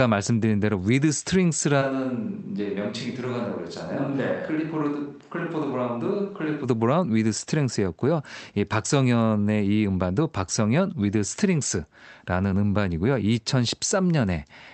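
From 1.83 s to 6.63 s the speech abruptly turns roomy and hollow, thinner in the bass, roughly 5 dB quieter and with more room noise behind it. It likely comes from a switch to a distant microphone, after which the close microphone returns suddenly.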